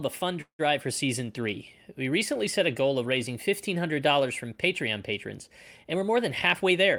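At 0.41 s, after "a fun", packets were likely held up and the jitter buffer ran dry. A call audio freeze follows: a fading buzz, then about 90 ms of silence, before "for season three" resumes intact at 0.61 s. From 5.83 to 6.17 s, an overfull buffer triggers a jitter buffer speed-up that trims about 50 ms in small pitch-period cuts, so the speech runs hurried at 112% speed with unchanged pitch.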